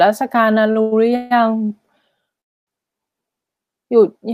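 Right near the start, at 0.71 to 0.78 s, there's a short stall from a late packet. The receiver's buffer ran dry for about 41 ms, so it held the last bit of speech a touch too long, which gives a brief smeared, slightly buzzy sustain. Nothing is lost; the speech picks up exactly where it paused, just about 41 ms later than it should.

Then come three call audio freezes, at 0.82 to 0.94 s, 1.16 to 1.33 s, and 2.41 to 2.69 s. The likely cause is packets being held up in transit long enough to empty the jitter buffer. The first two are stretched from the last sound, for about 100 ms and 150 ms, and come out as a fading buzz where the speech just hangs. The third is the longest at 263 ms and almost entirely silent. In each case the audio resumes from the same point, so the pause is inserted rather than anything being cut.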